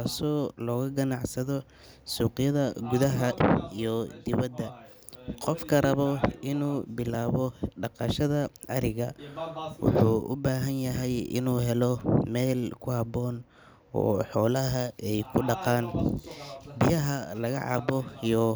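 A speech recording with one fault: chunks out of order between 11.98 and 12.01 s. A 10 ms chunk plays two chunks late, after audio that should follow it. Nothing is missing, but the order is scrambled. It sounds like a brief jumbled blip, with three hard joins.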